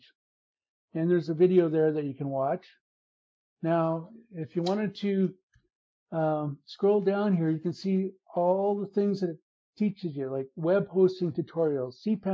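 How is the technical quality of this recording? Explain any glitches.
No glitches are audible; the recording shows only ordinary call microphone processing, with the lowest bass rolled off and nothing above 8 kHz, which is normal for that path.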